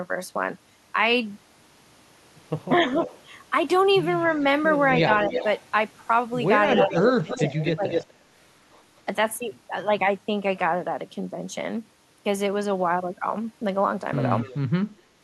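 A far-end echo canceller likely let loudspeaker pickup through, producing echo leak: a delayed copy of the speech at 2.79–3.22 s (301 ms late, about 15 dB down), 5.14–5.44 s (301 ms, about 5 dB down) and 6.72–8.04 s (248 ms, roughly level with the speech). Within that last stretch, the canceller likely confused talker and echo, causing speech suppressed in double talk: from 6.83 to 7.86 s the speech dips up to about 15 dB in pieces totalling roughly 0.4 s. A faint echo leak returns at 14.4–14.58 s (248 ms, about 20 dB down), then at 14.85–14.96 s the speech drops by about 20 dB.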